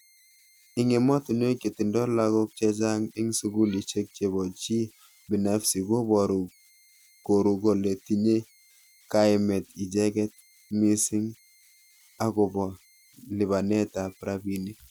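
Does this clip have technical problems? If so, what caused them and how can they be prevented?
Yes. Converter idle tones run through the whole speech clip: a faint whistle around 2 kHz, about 36 dB below the speech, heard in the pauses, with grainy noise under quieter passages. A delta-sigma converter without dither settles into repeating bit patterns when its input is small, and those patterns produce tones whose pitch follows the input's offset. Unlike a fixed electrical whine, this tone depends on the converter's input. Adding dither to the converter breaks up the patterns and prevents it.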